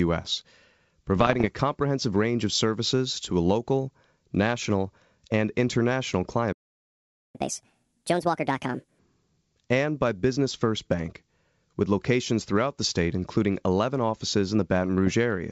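From 1.16 to 1.48 s, and again from 15.07 to 15.15 s, bit errors on the ADPCM link produce pops and rough, gritty bursts with brief jumps in level. Unlike a clean dropout, each error rings on for a few milliseconds while the decoder's step size and predictor recover. The first burst is the denser, with roughly one bit in 150 flipped.

At 6.53 s the sound stops mid-flow for 0.82 s. This playback stall was likely caused by the player running out of data or having its thread blocked. The silence is abrupt and complete, with no decay or residual noise, which sets it apart from a gated or faded gap.

From 7.35 to 8.99 s, catch-up at higher speed plays the backlog 1.5 times faster, lifting the pitch by about seven semitones along with the tempo, before it drops back to normal. Because pitch and speed rise together, this is resampling rather than time-stretching.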